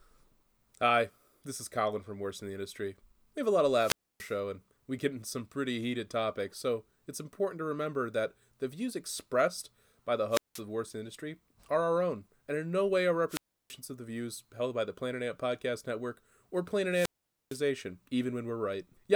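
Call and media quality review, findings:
Wireless microphone squelch dropout, four events. The analogue FM mic's radio link fades below the receiver's squelch threshold, so the receiver mutes its output. Heard as a short rise of hiss/static, a near-silent hole, then speech resuming.
3.71–4.37 s: after "have a lot of", 0.28 s mute, before "and we get into".
10.30–10.61 s: after "views expressed by the", 0.18 s mute.
13.28–13.75 s: after "in no way are", 0.33 s mute, before "of the views held".
16.90–17.61 s: 0.46 s mute, the longest.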